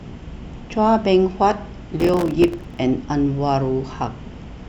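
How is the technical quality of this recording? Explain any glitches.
The recording has one clear glitch, a burst of processor overload crackle from 2.00 to 2.79 s. During that stretch the processor could not fill its short audio buffers, each only a few milliseconds long, in time, and dozens of deadlines were missed again and again. Each miss dropped a brief slice of silence into the speech with abrupt edges, and the rapid run of these cuts comes across as a gritty, tearing crackle over the voice until the load eases.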